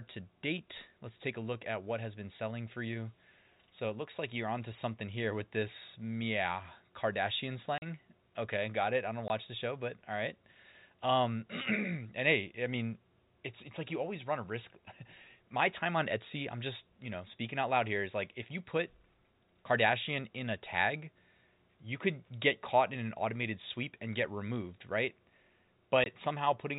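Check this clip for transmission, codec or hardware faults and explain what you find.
The clip has one transmission fault: packet loss filled with silence. It occurs three times. The speech passes through G.711 telephone coding, so nothing above 4 kHz is heard.

The first gap runs from 7.78 to 7.82 s and lasts 40 ms. The second runs from 9.28 to 9.30 s, between "got it I don't" and "the show but all", and lasts 20 ms. The third runs from 26.04 to 26.06 s, also 20 ms. Packets went missing, and the receiver played silence in their place. The 20 and 40 ms lengths fit 20 ms packets, with two lost in a row at 7.78 s. Each hole has hard edges, and it cuts through the speech abruptly.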